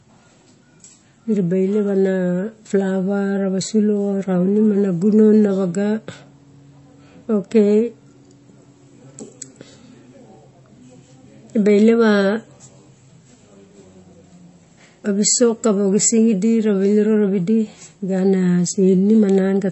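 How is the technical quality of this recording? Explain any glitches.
The quality is poor, with plainly audible coding damage throughout. Likely MP3 compression at a starved bitrate, which fits 32 kbps: the encoder cut everything above 8 kHz and dropped weak frequency lines, leaving the speech dull and watery.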